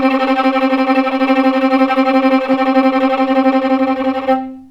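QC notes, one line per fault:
1.10 s, corrupt frame decoded: bit errors reached a couple of compressed frames and the decoder played them anyway, so misread gain and spectral codes put energy at the wrong frequencies for that instant, heard as a short, fairly loud blip over the sound.
2.51 to 2.54 s, corrupt frame decoded: the same damage across a few frames in a row, giving a longer and louder chirp-like burst lasting about 30 ms.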